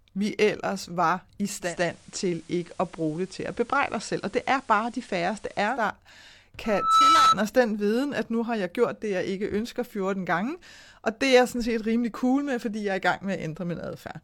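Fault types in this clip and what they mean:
Digital radio blending to analogue: the receiver lost its digital stream and cross-faded over 200 ms to the FM broadcast of the same station, so from 1.6 to 5.9 s the speech carries hiss roughly 30 dB down, at unchanged level.
Loudspeaker feedback squeal: a microphone picked up the loudspeaker it was feeding, and the loop gain exceeded one at 1.3 kHz. From 6.64 to 7.36 s that tone swells over about a third of a second to roughly 10 dB above the speech.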